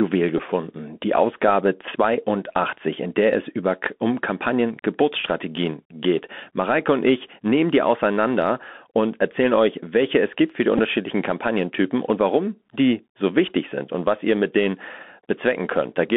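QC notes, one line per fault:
throughout: Bluetooth CVSD headset codec. The speech passes through a narrowband headset link that codes each sample as a single up-or-down bit, which fits a 64 kbps stream. Only about 200 Hz to 3.5 kHz survives, s sounds turn scratchy, loud bright moments distort, and granular hiss sits underneath.
0.38 s and 10.77–10.80 s (the latter right after "es gibt für die"): Bluetooth headset packet repeated. About 11.2 ms of audio went missing each time, which fits three lost headset packets, and the chip replayed the previous packet's data instead. Each repeat recurs every 3.75 ms, so the gap comes out as a brief buzzy burr near 267 Hz.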